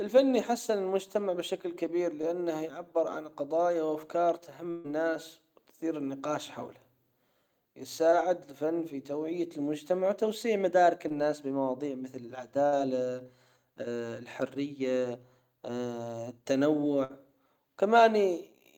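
At 2.21 to 2.25 s a brief smear or wobble passes through the speech. This is short concealed packet loss: about 20 ms of audio arrived too late for the decoder, which filled the gap by extending the preceding sound before blending back into the real signal.

Right after "يعبر عن قضايا وافكار", from 4.71 to 4.86 s, the last sound hangs and fades before the speech picks up further along. This is a burst of packet loss: roughly 140 ms went missing, and the receiver stretched and attenuated what came before, so that stretch of speech is simply gone.

Two more short concealed packet losses of about 20 ms each sound as quick wobbles. The first is at 8.10 to 8.14 s, just before "الفن في توعية المجتمع". The second is at 11.08 to 11.12 s, just after "توعية المجتمع وتوسيع مدارك".

Shorter bursts of packet loss follow at 12.66 to 12.74 s and 17.04 to 17.12 s. Each sounds like a held, fading fragment followed by a jump ahead, where about 60 ms was lost and bridged by continuing the preceding sound.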